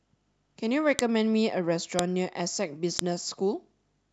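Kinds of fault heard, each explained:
File header played as audio: the speech was assembled from roughly one-second pieces whose WAV headers were left in. Those few dozen bytes play as raw samples, giving a sharp, loud click at 0.99, 1.99 and 2.99 s. Unlike random dropouts or clipping, the clicks land at a steady one-second spacing regardless of what the speech is doing.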